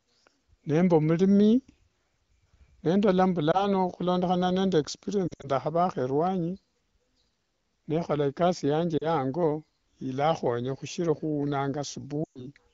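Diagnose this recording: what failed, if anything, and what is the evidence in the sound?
Lost AMR speech frames (network): at 3.51, 5.28, 8.97 and 12.23 s the sound warbles and fades as the decoder repeats pitch at falling gain, rather than cutting to hard silence.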